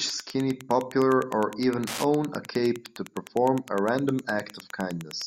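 Throughout the speech runs Wi-Fi interference: a nearby radio's beacon, repeating every 102.4 ms, is rectified by the audio circuit into a steady tick about ten times a second, roughly 20 dB under the voice. Unlike mobile-phone buzz, it ticks rather than buzzes.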